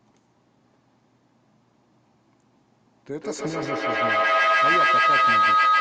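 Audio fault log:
3.21 s to end, feedback howl: a tone near 1.5 kHz builds as the loop repeats about every 150 ms, climbing to about 12 dB over the speech as the loudspeaker-to-microphone loop gains level each pass.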